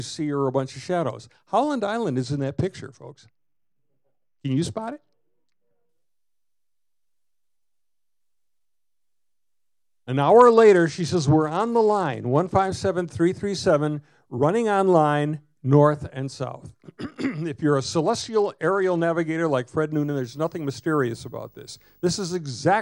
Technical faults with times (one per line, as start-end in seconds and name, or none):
2.21-5.89 Bluetooth SBC bit pool drop
10.23-12.69 Bluetooth SBC bit pool drop
17.81-19.01 Bluetooth SBC bit pool drop
19.93-22.36 video or display buzz